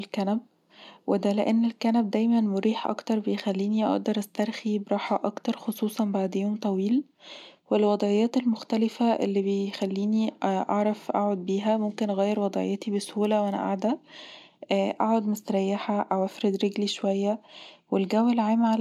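Nothing in the recording stood out as a technical fault on listening.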